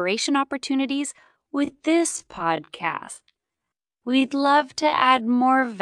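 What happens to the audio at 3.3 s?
At 3.3 s the audio sits inside a time-stretched section that runs from 1.16 s to the end of the clip, likely caused by software lengthening the passage to fit a slot while holding pitch steady by repeating short fragments. The speech plays at about 0.575 times its normal pace from just before "to our" onward, so the pitch stays put but the delivery drags abruptly.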